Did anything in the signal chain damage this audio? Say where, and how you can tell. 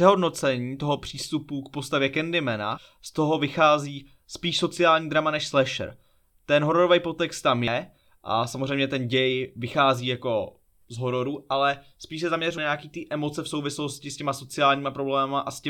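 Yes. The speech jumps abruptly at 7.68 s and 12.58 s, each time losing about a tenth of a second, with the two sides joined directly and no silence between. This is audio missing between chunks, likely a recorder or buffer stage dropping material while closing one 5-second chunk and opening the next.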